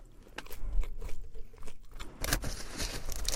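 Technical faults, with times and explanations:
No technical faults can be heard in this clip. Nothing in the sound calls for a time or an explanation.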